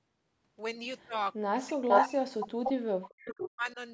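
From 1.49 to 1.81 s the speech sinks away, dropping by something like 35 dB, and it does it again from 2.03 to 2.89 s and from 3.26 to 3.78 s, around 40 dB down each time. That's most likely speech suppressed in double talk: with both ends talking at once, the echo canceller turned everything down.

Threaded through that is an echo leak, a copy of the speech trailing by 445 ms. It's noticeably louder than the speech at 1.88 to 2.05 s, a bit quieter at 2.65 to 2.72 s, and well under it at 3.03 to 3.49 s. That's likely a loudspeaker echo the canceller didn't fully remove.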